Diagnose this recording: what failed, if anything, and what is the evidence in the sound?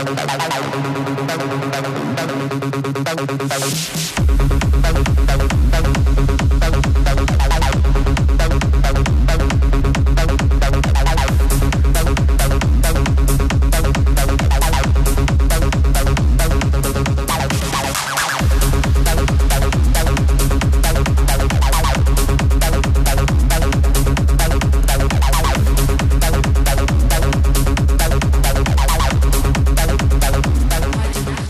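Repeated frames at 24.82 s and 30.58 s, a fault at the codec or storage stage. At each point a 46.4 ms block of the compressed stream is played a second time, producing a short stutter where the same fraction of sound comes back immediately. That length fits two coded frames of about 23 ms each, duplicated during writing or transmission and decoded again as new data. Each repeat adds 46.4 ms to the running time.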